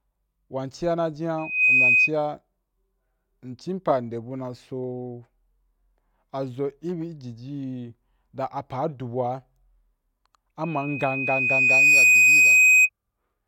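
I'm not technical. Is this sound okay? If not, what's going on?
No. A high, piercing whistle, a loudspeaker feedback squeal, cuts into the speech twice: briefly from 1.38 to 2.11 seconds, where it shoots up within a split second, and again from 10.63 to 12.89 seconds, where it swells more slowly and ends up louder than the speech. Both times it is the same shrill pitch, around 2.5 kHz. This happens when a microphone picks up the loudspeaker it is feeding, so that one pitch keeps going round the loop and growing.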